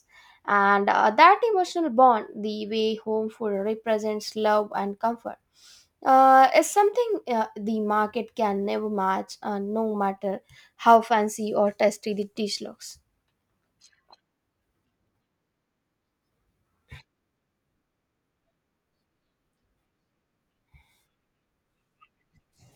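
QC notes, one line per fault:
3.54–10.96 s, sample clock jitter: the converter's clock wanders by a few microseconds, so each sample lands slightly off time and the error scales with how steeply the waveform is moving. A rough hiss rides on loud, bright speech at around 35 dB below the signal, then falls silent in pauses, ending just before "fancy or tasty the". On a spectrogram, a broadband haze fills in above the harmonics only where speech is strong; the waveform looks intact.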